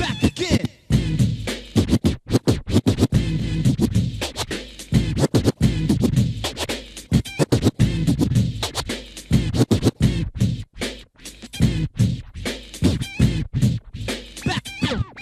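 At 3.39 to 3.44 s the audio jumps abruptly forward, with a short blip lasting about 50 ms at the join. The sound before and after the jump does not connect, which points to a stream segment skipped. The likely cause is that one segment of the segmented stream failed to load and the player moved straight on to the next one, so that stretch of programme is simply absent rather than delayed or repeated.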